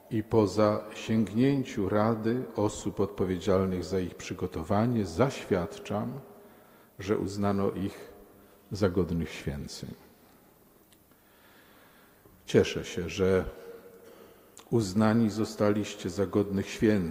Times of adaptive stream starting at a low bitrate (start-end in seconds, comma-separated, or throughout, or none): 0.00-4.00